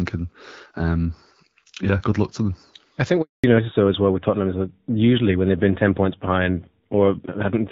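At 3.22 s the speech fades out within a few tens of milliseconds and stays silent until 3.44 s. This 220 ms handover gap happens because the call is passed between networks and no speech frames arrive during the switch. Unlike packet loss with concealment, there is no buzzy filler. The audio simply stops.

From 3.44 s to the end there is a fallback to narrowband. The speech had been light-damage HD Voice with a bright, fairly clear top. Now it has nothing above 4 kHz and sounds duller and rougher, which fits AMR-NB at about 7.4 kbit/s. A low-rate wideband codec would still keep some band up to 7 kHz. Here the top is cut off completely.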